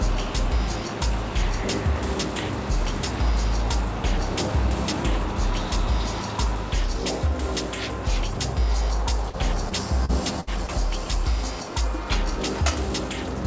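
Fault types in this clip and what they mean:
Repeated packet loss (robotic sound): Packets went missing again and again between 9.30 and 10.70 s. Five gaps were each patched by continuing the preceding sound, the longest 64 ms. That concealment fills 12 percent of the stretch, which turns choppy.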